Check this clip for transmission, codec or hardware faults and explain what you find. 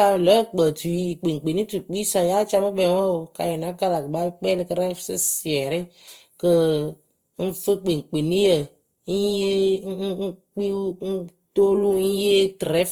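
One fault runs through the whole speech clip, likely Opus compression: its music-mode coder, starved at a rate fitting about 24 kbps, fills bands with noise, leaving speech plainly rough and grainy though full-band to 20.2 kHz.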